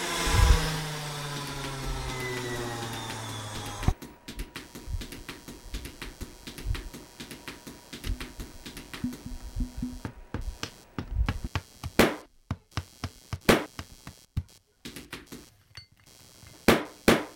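From start to finish there's computer activity noise: a buzzy, chirping pattern pulsing at around 150 Hz, sitting roughly 25 dB under the sounds. It's the machine's processor or graphics load shifting the shared ground, so it rises and falls with the computer's activity rather than the sounds.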